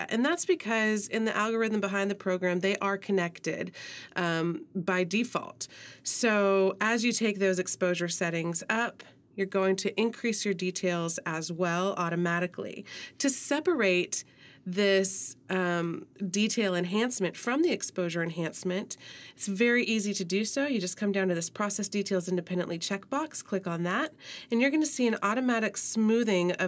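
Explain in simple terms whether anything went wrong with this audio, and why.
Nothing went wrong here, so there's nothing in the recording to point to or explain away.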